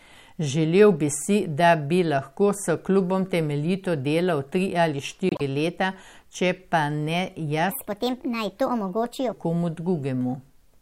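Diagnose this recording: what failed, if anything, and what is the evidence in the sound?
Codec stage. At 5.29 s a short glitch breaks into the speech and lasts until 5.41 s. That is a corrupt frame decoded. Flipped bits in the compressed data gave the decoder wrong gains or misread codes, and it played the damaged frames anyway. Energy landed at frequencies that don't belong to the speech. The 0.12 s span fits roughly four frames hit in a row. Then the stream recovers.

Playback or editing stage. From 7.71 s to 9.33 s a section at the wrong speed plays at 1.39 times normal speed. The speech turns high and hurried, raised by about five semitones. Pitch and pace shift together and snap back at the end of the section. That pairing points to resampling, not pitch processing. The likely cause is that this part was played out or edited against the wrong clock rate.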